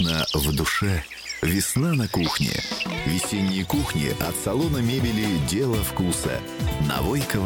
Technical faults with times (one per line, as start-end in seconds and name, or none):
2.77 repeated buffer
4.24 repeated buffer